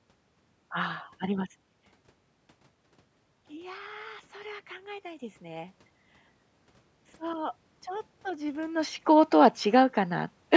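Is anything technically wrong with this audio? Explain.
Yes, two faults. At 4.19 s, new audio arrived late, so the device replayed its last 5.8 ms block once, which fits a 256-sample buffer. This is a repeated buffer, heard as a brief click.

From 7.21 to 9.37 s, automatic gain rising: the control judged the input too quiet and lifted its gain by about 4 dB, so the speech and room noise swell together.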